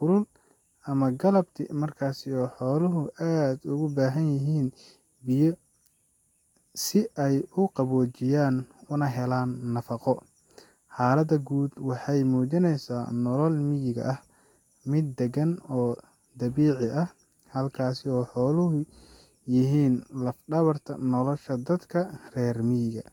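From start to finish, the speech has a swirly, smeared, hollow quality. Consonant attacks blur, and nothing sits above 19.3 kHz. This is generation loss, likely caused by lossy re-encoding, about three passes in a row. The sound points to Vorbis at around 65 kbit/s each time. Every pass re-quantises on a shifted frame grid. The noise and spectral holes stack up, so the result sounds worse than one encode at that rate would.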